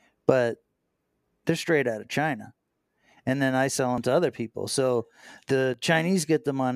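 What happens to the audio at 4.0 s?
At 3.98 s, just after "and then I sell" and before "to other people", there is a dropped buffer (overrun). The speech does not pause. It jumps straight ahead, as if a slice had been cut out and the two edges spliced together. Roughly 30 ms of sound is missing. The likely cause is that the recording software failed to collect a block of samples in time, so the hardware wrote over it.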